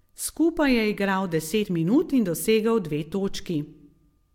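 At 1.64 to 1.66 s, just before "minut in dosegel dve", compressed frames are skipped. About ten frames are not played, so roughly 50 ms of speech is lost. The audio jumps forward.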